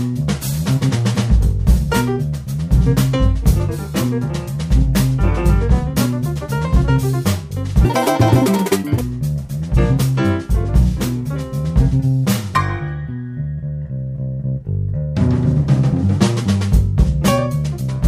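From 7.85 to 9.01 s the sound turns sharply higher and hurried, lifted by around ten semitones and running at 1.99 times normal speed. This section at the wrong speed likely comes from that stretch being played against the wrong clock.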